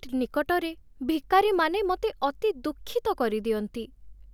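No technical faults are audible.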